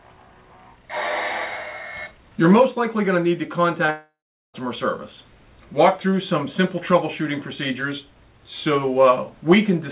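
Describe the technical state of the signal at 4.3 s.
At 4.3 s the signal sits inside a long network dropout running from 3.90 to 4.56 s. The last sound before the gap is stretched into a fading buzz. That fill soon dies away, leaving about 390 ms of silence or faint steady noise. Roughly two-thirds of a second of audio never plays. The likely cause is lost packets on the call link. When sound resumes it is still band-limited below 4 kHz, as G.711 A-law at 64 kbps would leave it.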